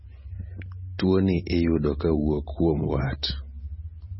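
Throughout, the speech stops at 5.6 kHz and sounds watery and swirling, likely heavy MP3 compression near 18 kbps. That flicker distinguishes it from plain low-pass filtering.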